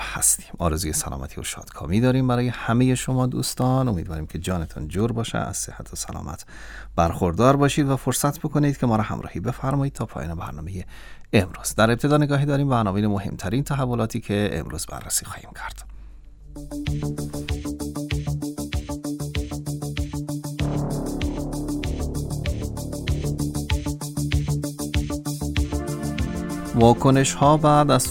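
From 3.01 to 5.01 s the sound carries a crude rate conversion. The grit fits a 44.1 kHz stream stretched to 48 kHz by simply repeating the nearest sample, with no interpolation filter. Those repeats fall in a fixed cycle set by the ratio of the two rates, producing spurious tones with no musical relation to the source, roughly 25 dB below it. They come through as a fizzy, inharmonic buzz riding on the louder and brighter parts.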